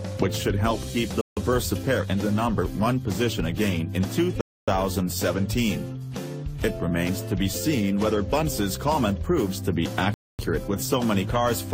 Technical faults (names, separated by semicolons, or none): Bluetooth stall